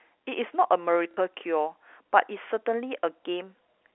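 At 1.12 to 1.17 s the speech briefly stutters: packet loss with the last packet repeated, where about 60 ms of audio, consistent with two lost packets, was filled by replaying the previous packet. The waveform shows a copied block, and the spectrogram shows the repeated section over the 300 Hz to 3.5 kHz telephone band.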